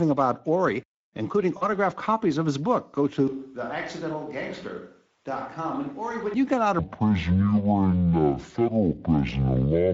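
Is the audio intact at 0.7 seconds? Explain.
No. At 0.7 seconds, as throughout the recording, the speech has passed through the Speex codec, with damage that fits a setting of about 16.8 kbps. This CELP coder rebuilds speech from a compact model of the vocal tract plus an excitation signal, and at this rate it has too few bits to code that excitation faithfully. The result is plainly audible: the speech sounds noisy and hoarse.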